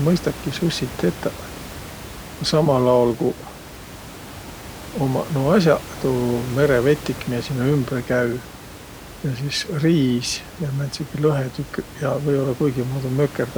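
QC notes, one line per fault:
No faults found in the speech; room noise sits about 16 dB below the voice and belongs to the recording.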